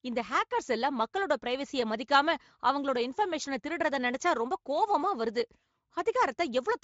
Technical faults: none

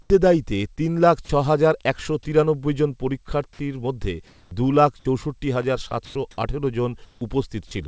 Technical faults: comfort noise in place of the background; short concealed packet loss; sound dropped by the voice detector; electrical switching spike; sound chopped by the voice detector

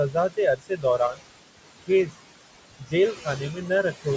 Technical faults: noise suppressor artifacts; speech cut by the noise suppressor

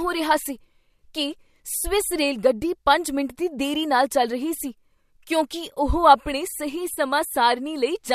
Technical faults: AAC frame loss with concealment

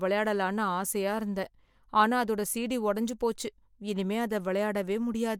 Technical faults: none

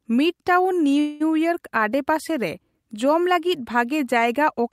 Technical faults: call audio freeze

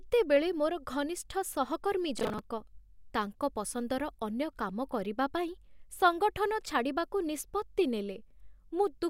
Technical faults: processor overload crackle

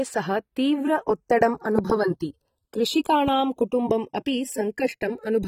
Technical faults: channels drifting apart; AAC compression; loud pop

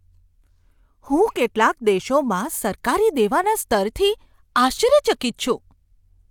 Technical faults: none

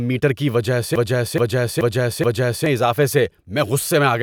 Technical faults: broken-record loop

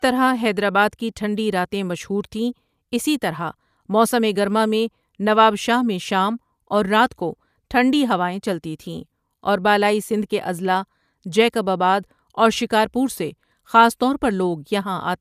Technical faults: none

